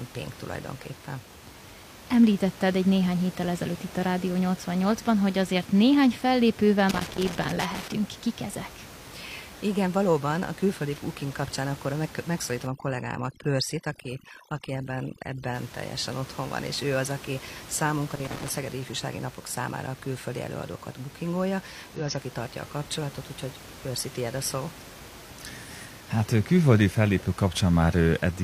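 From 6.89 to 7.92 s, just after "hogy azért néhány fellépővel", and again from 18.11 to 18.55 s, there is loose connector crackle. A worn contact keeps making and breaking, chopping the signal into irregular scratchy bursts. The timing is ragged and uneven, unlike the steady tick of a clock or buffer fault.

Between 12.67 and 15.54 s, from "kapcsán akkor meg megszólítom" up to "teljesen otthon van és", overdone noise removal sets in. The room noise, about 19 dB below the speech elsewhere, drops and breaks up into twinkling specks. That twinkling sets it apart from simple muting.

At 21.95 to 22.01 s, after "a külföldi előadókat bookingolja" and before "az aki tartja a", a brief glitch marks damaged data in a compressed stream. The decoder misread corrupted frames and resynced. Its short glitch differs from the crackle's scratchy bursts.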